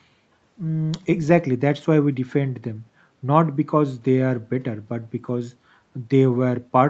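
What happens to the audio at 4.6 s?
At 4.6 s the speech carries on intact, with no dropout, glitch or distortion, just the steady call-codec sound whose content stops around 8 kHz.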